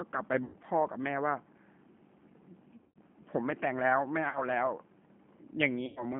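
G.729 codec damage runs through the whole of this speech clip and is plainly audible. The codec rebuilds each 10 ms frame from a vocal tract filter, a pitch predictor and a handful of pulses at 8 kbit/s, so the voice comes out slightly rough and synthetic. The line band of about 150 Hz to 3.4 kHz strips the low body and all the upper air. VoIP packet loss concealed by the speech codec breaks in four times: 0.44 to 0.56 s, 2.76 to 2.98 s, 4.29 to 4.43 s and 5.86 to 6.05 s. In each gap the decoder keeps extrapolating from its last pitch and filter settings and lowers the gain frame by frame, so the sound smears into a fading buzzy tone or coloured noise. The longest dropout, at 2.76 s, points to about 160 ms missing, scattered over 200 ms with a 120 ms run. The shortest, at 4.29 s, is around 60 ms. Because each frame builds on the one before, the voice stays weak or distorted for tens of milliseconds or more after each gap ends.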